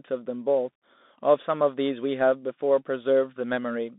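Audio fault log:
throughout: Bluetooth CVSD headset codec. The speech sits in a narrow band from 200 Hz to 3.7 kHz, and the one-bit up/down coding can't keep pace with loud, bright sounds, so the s sounds turn scratchy over a grainy hiss. That fits a 64 kbps CVSD link.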